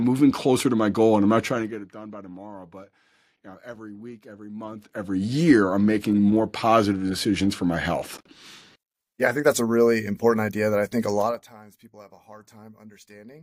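Level changes were applied in unsmoothed steps, causing zipper noise at 1.41 to 1.88 s (down about 20 dB in 2 dB steps), 4.57 to 5.25 s (up about 20 dB in 1 dB steps) and 11.18 to 11.52 s (down about 25 dB in 3 dB steps). Each step, roughly twenty a second, clicks, giving a ticking rasp.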